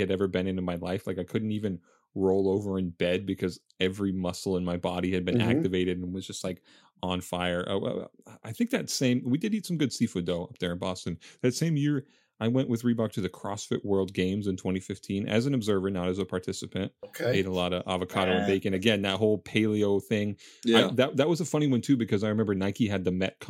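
Right after "activated and", from 6.14 to 6.83 s, the speech suddenly runs 5.76% fast and sits about a semitone sharp (97 cents) before dropping back into place for "on fire". Then after "though up there in", from 10.99 to 11.98 s, it goes the other way: 5.76% slow and roughly a semitone flat (103 cents) until "I went with". That's likely a drift correction step, where clock-matching software jumps the playback rate to refill or drain its buffer.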